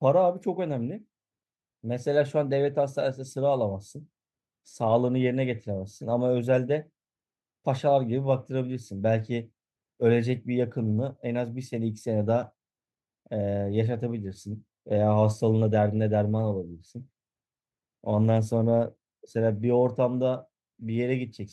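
No technical faults can be heard in this recording.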